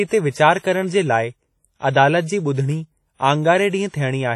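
Speech, and the whole thing carries heavy transform-codec damage, likely WMA compression at a low rate, which fits around 32 kbps. There's a washy, ringing smear around the words, a hiss that breathes with the level, and nothing at all above 14.9 kHz.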